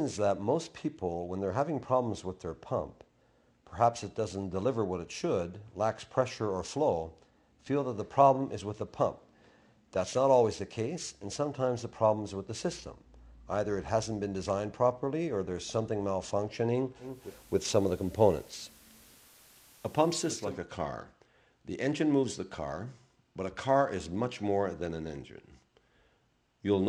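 At about 16.99 s the receiver loses its digital stream and does a digital radio blend to analogue, cross-fading over roughly 0.36 s to the FM signal. Hiss rises to around 30 dB below the audio, the level shifts by about 1 dB, and it blends back at 20.59 s.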